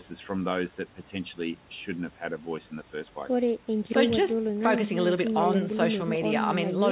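No technical faults can be heard in this recording.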